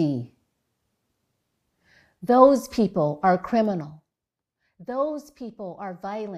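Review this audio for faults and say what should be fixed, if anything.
Zipper noise runs from 3.62 to 4.27 s as the speech level drops by roughly 15 dB in uncushioned steps of about 2 dB, around ten a second. Each jump puts a small click in the waveform, heard as a ticking that rides on the speech while the fade is in progress. To prevent it, ramp the gain per sample or smooth it with a short interpolation instead of updating it in coarse blocks.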